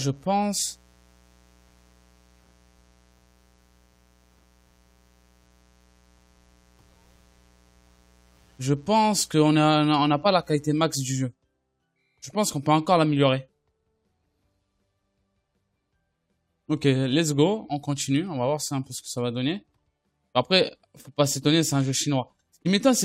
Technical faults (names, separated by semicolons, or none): mains buzz